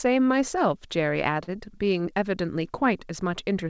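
At 1.44 to 1.49 s the speech briefly hangs, one sound held unnaturally long with a faint buzz or dip, then resumes where it left off. This is a short stall from a late packet: the jitter buffer emptied, about 35 ms was stretched to fill the gap, and nothing was lost, though the delay grew by 35 ms. Audio throughout carries nothing above 8 kHz, as the G.722 call codec passes.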